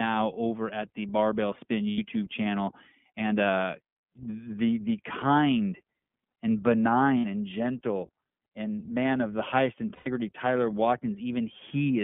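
From start to finish the speech carries iLBC codec damage. The audio is limited to a telephone line band of 150 Hz to 3.5 kHz, and the coding roughness is plainly audible, with a slightly synthetic, grainy edge on voiced sounds. Because each short frame's excitation is coded on its own, the texture suits a 15.2 kbps mode with 20 ms frames. On a spectrogram the energy stops sharply at 3.5 kHz, with nothing above it, and very low frequencies are thinned out.

Lost iLBC frames interrupt the speech three times. The first runs from 1.90 to 1.99 s, about 80 ms. The second runs from 7.18 to 7.25 s, about 60 ms, just before "and gentle and man". The third runs from 9.94 to 10.08 s, about 120 ms, just after "man of the highest". In each gap the decoder repeats the last pitch cycle blended with noise, which sounds like a held, faintly buzzy vowel, and the speech recovers almost immediately afterwards. 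On a spectrogram each gap shows flat, repeated harmonic bands instead of moving formants. On the waveform it appears as a regular periodic stretch that fades slightly over the longest 120 ms gap.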